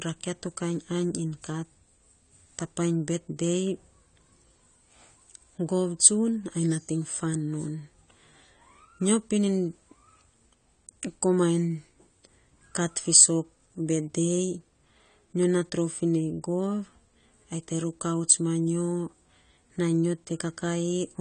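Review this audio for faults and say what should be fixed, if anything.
The whole clip shows AAC compression damage, and it is plainly audible. Nothing reaches above 9 kHz, so the speech sounds dull and closed in. Sibilants turn fizzy and smeared. Sustained sounds pick up a warble. This is likely AAC-LC at a low rate, which fits a bitrate of around 32 kbps. At that rate the encoder drops the top band and coarsely quantises what remains. Gaps and substitute noise then fill the spectrum. To prevent this, encode from the original at a higher bitrate, or keep a lossless master.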